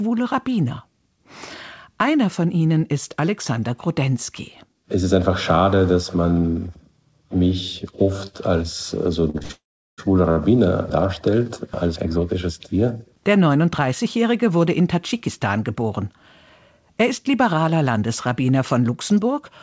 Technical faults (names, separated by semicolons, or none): short stall from a late packet; call audio freeze; jitter buffer speed-up